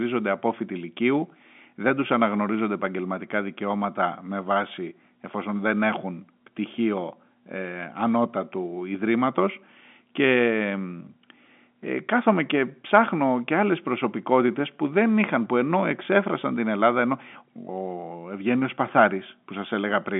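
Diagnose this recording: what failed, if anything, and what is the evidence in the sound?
Nothing stood out on listening to this telephone-band speech recording, and no stage in the chain shows a failure.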